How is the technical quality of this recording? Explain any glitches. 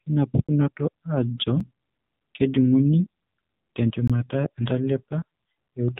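The recording has clearly reduced technical quality: it has passed through a low-bitrate mobile speech codec, and it has three short dropouts.

Throughout the clip, the sound carries the marks of the AMR narrowband mobile codec, running at about 7.4 kbps. This codec rebuilds speech from a compact vocal-tract model excited by sparse pulses. At this low rate that model is coarse, so the voice sounds buzzy, thin and synthetic. Nothing above 3.8 kHz survives. On a spectrogram, the energy stops at a hard ceiling near 3.8 kHz, with blank space above it.

There are three blocks of digital silence. The first is a single event at 0.47 s, lasting about 18 ms. The second is at 1.6 s and lasts about 5 ms, which fits a 256-sample block. The third runs from 4.08 to 4.10 s, about 21 ms, consistent with a 1024-sample block. In each case the output was briefly filled with zeros instead of audio, most likely because the buffer was not delivered in time. 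The signal drops straight to zero with no fade. The shortest gap is heard as a tick, and the longer two as tiny holes. On a waveform, each appears as a flat line of silence. On a spectrogram, each shows a thin vertical blank strip.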